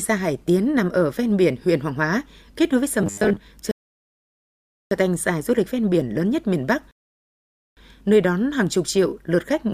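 Robotic sound from repeated short buffers runs from 3.02 to 3.38 s. The speech turns into a stiff, metallic buzz pitched at 100 Hz, which fits a 10 ms chunk being played again and again. The likely cause is audio arriving too slowly, so the player loops its last fragment to fill the gap. Roughly half of this stretch is repeated material, and the real audio behind it is skipped, though the buzz still loosely tracks the speech.

A rebuffering stall follows from 3.71 to 4.91 s, and a second one from 6.91 to 7.77 s. Each time the player exhausted its downloaded audio and halted, so the speech drops to silence and then picks up exactly where it stopped. Nothing is lost, but the pauses add about 1.2 s and 0.86 s to the running time.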